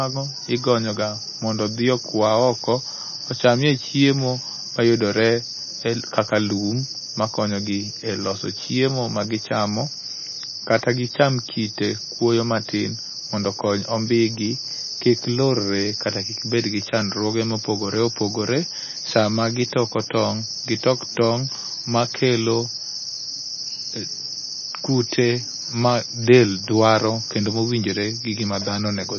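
MP3 compression artefacts run through the whole speech clip. Nothing sounds above 6.5 kHz, and the treble loss, watery swirl and metallic s sounds point to an encoder likely starved at a very low bitrate, one that fits roughly 23.4 kbps.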